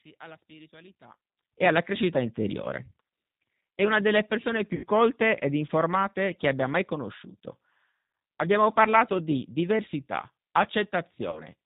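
Throughout the whole recording the speech carries the mark of the G.729 codec at 8 kbit/s. Each 10 ms frame is rebuilt from a vocal tract filter, a pitch predictor and a few pulses, so the voice sounds rough and faintly synthetic. On a spectrogram everything stops sharply at 4 kHz, with nothing above, and the harmonics look blurred and grainy.

From 0 to 1.52 s, ending just before "e alla crescita", the sound is faint and distant, about 23 dB below what follows. The likely cause is one channel inverted: with one side's polarity reversed, the centred voice cancels when the channels are summed to mono, leaving only their faint difference. The waveform shows a small envelope that jumps up once the two sides add normally.

Between 4.75 and 4.86 s, after "una delle persone" and before "colte ed informate che", VoIP packet loss concealed by the speech codec stretches the last sound out as it fades. 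It fills about 80 ms, which fits four 20 ms packets lost. The decoder repeats its last pitch and filter at falling gain, so the spectrogram shows flat, smeared harmonic lines and the waveform a decaying, periodic stretch. Speech returns weak for a moment after. The same concealment recurs at 11.3 to 11.43 s, covering about 60 ms.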